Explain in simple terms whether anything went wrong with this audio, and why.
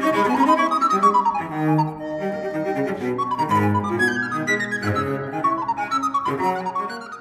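Nothing went wrong here; no faults can be heard.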